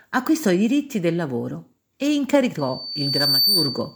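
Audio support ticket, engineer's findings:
Rising pure tone at 4.6 kHz from 2.58 s, just after "diritti del lavoro e". Swells over under a second to a few dB above the speech and holds to the end. Loudspeaker feedback squeal: mic picking up its own speaker, loop gain above unity at 4.6 kHz.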